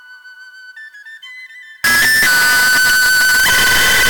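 From 1.84 s to the end of the clip, the sound turns into very loud, harsh distortion, and quiet moments are as loud as everything else. This is most likely a signed and unsigned mix-up on 8-bit samples: flipping the top bit turns every zero crossing into a jump across the full range.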